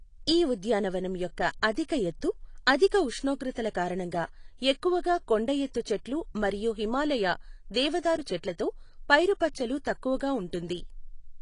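Speech runs the whole way through with plainly audible AAC compression damage: nothing survives above 10.2 kHz, so the voice sounds dull, and sibilants and sustained vowels carry a warbling, fizzy smear. The likely cause is low-bitrate AAC-LC encoding, around 32 kbps by the sound of it, which drops the cut-off and coarsely quantises what remains. On a spectrogram the energy stops at a hard ceiling near 10.2 kHz, with patchy holes and blocky smearing in the upper bands.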